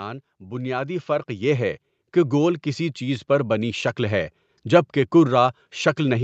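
From 0.39 s to 3.94 s the speech shows automatic gain rising: the level control judged the input too quiet and kept raising its gain, by about 10 dB over roughly three and a half seconds. Voice and background noise swell together, so the room seems to creep closer rather than the talker leaning in. On a waveform the envelope widens steadily across that span; a spectrogram brightens evenly at all frequencies up to its 8 kHz ceiling, noise floor included.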